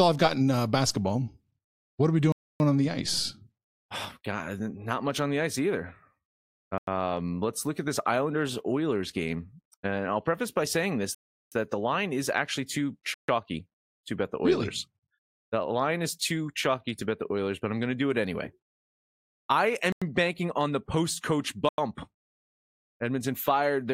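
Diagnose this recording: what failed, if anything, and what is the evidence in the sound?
Buffer underrun at the driver or buffer stage: the speech drops to blocks of digital silence at 2.32–2.60 s, 6.78 s, 11.15–11.52 s, 13.14–13.28 s, 19.92 s and 21.69 s. The 93 ms gaps fit 4096-sample blocks at 44.1 kHz, and the 0.37 s gap fits 16384. The output buffer likely went unfilled. The waveform shows flat near-silent stretches with hard edges. The spectrogram shows dark vertical bands.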